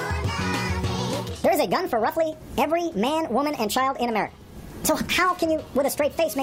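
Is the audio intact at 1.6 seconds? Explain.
No. At 1.6 seconds the audio has a wrong sample rate fault, which runs through the whole clip. The samples are played back faster than they were captured, with no rate conversion. Everything runs 1.5 times too fast and sits about 7 semitones too high, which fits material recorded at 32 kHz being played at 48 kHz. Speed and pitch shift together, so the sound at that moment is raised and hurried.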